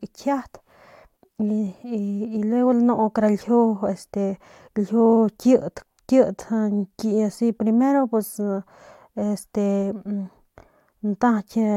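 Listening to the speech in this clip, nothing stood out as a technical problem at any point.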